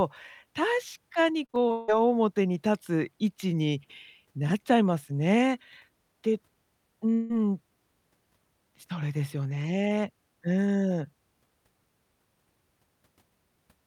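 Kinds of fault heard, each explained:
Repeated packet loss (robotic sound): Between 1.45 and 1.90 s the speech breaks up into five short holes, the longest about 0.16 s. Each hole is papered over by stretching the sound just before it, so more than half of that half-second is synthetic continuation and the voice turns choppy. The holes come in a quick cluster with real audio between them, which sets this apart from one single long outage.
Long network dropout: From 7.14 to 7.32 s the speech stops and is replaced by a smeared continuation of the last sound for about 0.16 s. There is no stretch of silence before the voice returns, and the part that was missed is simply gone. The likely cause is a single longer interruption in arriving audio. Unlike the choppy stretch earlier, this is one unbroken filled gap rather than a run of short ones.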